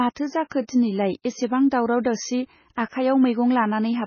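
Speech throughout the clip carries heavy MP3 compression damage, likely from a very low bitrate around 16 kbps. Nothing survives above 6.6 kHz, and the watery, swirling texture and smeared onsets set it apart from a simple low-pass filter, which would dull the treble without that shimmer.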